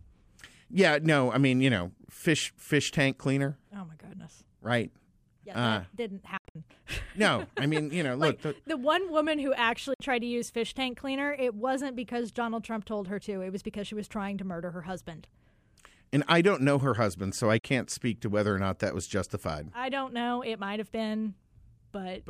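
Around 6.37 to 6.56 s, just before "no I", the speech chops into a cluster of short silences, about 145 ms lost over 174 ms, the longest gap about 73 ms. A 58 ms hole follows at 9.94 s between "the one woman who" and "tried to use fish", then a 44 ms one at 17.59 s between "her husband so I" and "speak to whether or." Each cuts in abruptly and resumes as if the speech had kept going underneath. That's most likely a Bluetooth dropout, with packets arriving too late and getting discarded.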